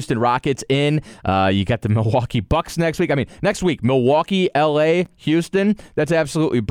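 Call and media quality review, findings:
Chunks out of order, speech. At 3.52 s, one 5.8 ms chunk plays one slot late; at 5.05 s, a chunk plays two slots late. Brief jumbled moment, nothing missing. Probable component: playback buffer or jitter queue writing blocks out of sequence; 5.8 ms fits a 256-sample block. Waveform: three hard discontinuities per event. Spectrogram: thin vertical broadband lines with harmonics briefly misaligned.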